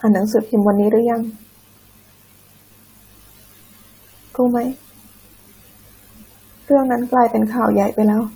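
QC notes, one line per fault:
Nothing to flag on this speech clip; it all sounds as it should.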